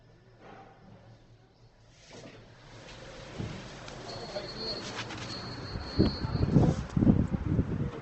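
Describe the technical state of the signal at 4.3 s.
At 4.3 s the sound carries Opus compression damage, and it persists across the whole clip. Nothing is present above 8.2 kHz. The grainy, rough texture fits a low bitrate near 16 kbps in the music (CELT) mode. With so few bits, the encoder keeps each band's energy but fills the detail with folded or noise-like content. The likely cause is that encoder. Tonal parts sound noisy and coarse rather than swirly, and the artefacts are plainly audible.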